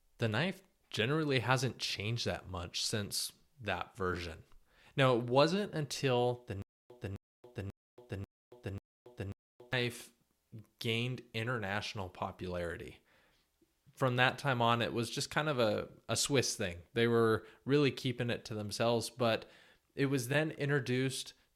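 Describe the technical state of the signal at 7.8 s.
At 7.8 s the signal is in a stutter with silent gaps running from 6.62 to 9.73 s, just after "it wasn't until the". The stream likely stalled and replayed its last fragment on each retry: a 0.26 s burst repeats five times every 0.54 s, separated by 0.28 s of digital silence, and the speech that belonged there never plays. On a waveform, identical blocks alternate with flat, near-silent stretches; a spectrogram shows repeated matching patches between blank vertical bands.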